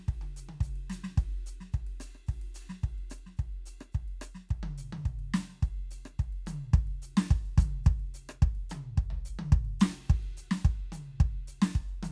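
Music, with no faults to report.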